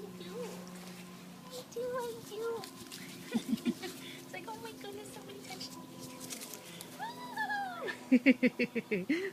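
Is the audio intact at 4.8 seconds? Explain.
Yes, the audio is intact at 4.8 seconds, with no dropout, click, distortion or other fault at that point.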